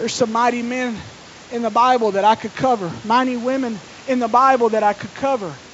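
No technical faults occur in the speech: room noise sits about 25 dB below the voice, and the call path's G.722 coding leaves nothing above 8 kHz, which fits a 64 kbps wideband link.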